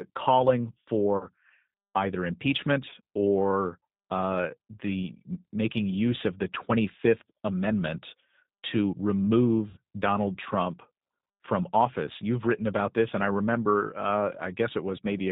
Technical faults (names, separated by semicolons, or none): G.729 codec; VoIP packet loss concealed by the speech codec